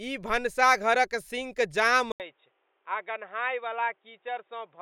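Input switched to a poorer device at 2.12 s, just after "सिंक जाम", and the degraded sound continues to the end. A short gap of about 80 ms marks the switch. From then on nothing above 3.8 kHz gets through, so the speech turns dull and boxy. The level drops by about 5 dB, and a new, faint noise floor appears about 40 dB below the signal. The likely cause is the system changing its input mid-recording to a narrower-band microphone or a headset's call profile.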